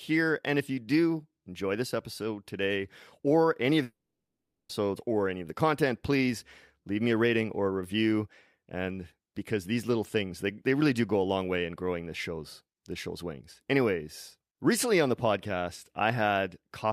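At 3.83 s the speech stops abruptly. A short buzzy tail carries the last sound on and fades within about a tenth of a second. Near-silence then holds for roughly 0.77 s. At 4.71 s the speech resumes mid-flow, and the stretch in between never comes back. This points to a long network dropout, likely caused by roughly 0.86 s of audio failing to arrive. The receiver briefly stretched the last sound, then gave up.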